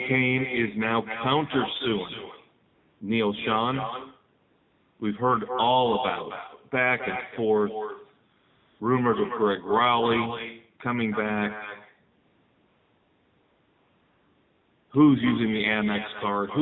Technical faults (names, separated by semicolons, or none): echo with no canceller; AMR narrowband mobile codec; AMR comfort noise